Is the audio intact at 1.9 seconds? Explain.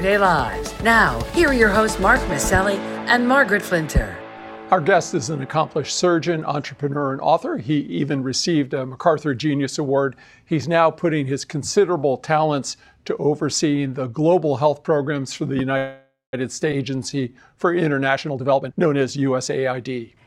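Yes, the audio is intact at 1.9 seconds, with no dropout, click, distortion or other fault at that point.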